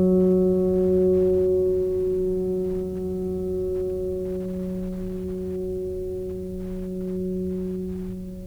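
No technical faults can be heard anywhere in this music recording.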